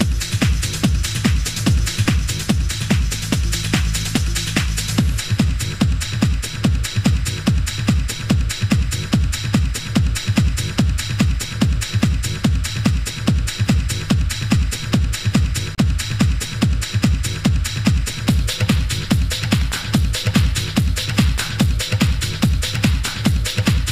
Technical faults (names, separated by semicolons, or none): Bluetooth stall